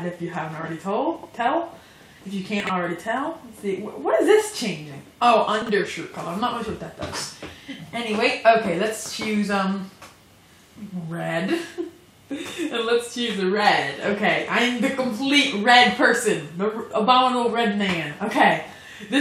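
Chunks out of order at 1.16–1.25 s, 2.60–2.69 s and 5.62–5.69 s: a 23 ms block plays three chunks late (two at 5.62 s). Each spot sounds briefly jumbled.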